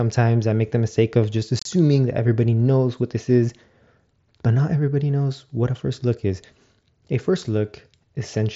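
Between "the mistake of just" and "that everybody knows what", at 1.59 to 1.66 s, the speech breaks up from unconcealed Bluetooth headset packet loss. About 52 ms of audio is missing across a 60 ms stretch, with the longest gap 30 ms, which fits roughly seven lost mSBC frames. Nothing fills the holes, so the voice sounds chopped, with hard edges. A waveform shows flat slices with abrupt cuts. A spectrogram shows blank vertical bands across the full 8 kHz wideband range.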